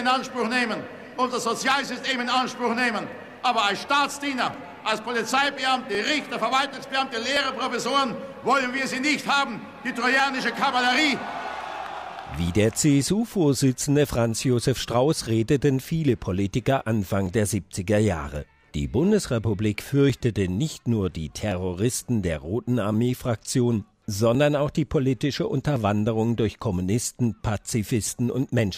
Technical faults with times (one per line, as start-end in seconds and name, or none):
0.30-28.59 clock drift buffer slips